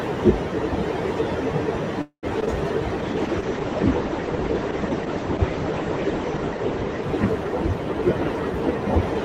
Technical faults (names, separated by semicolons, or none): call audio freeze; short concealed packet loss; call bitrate drop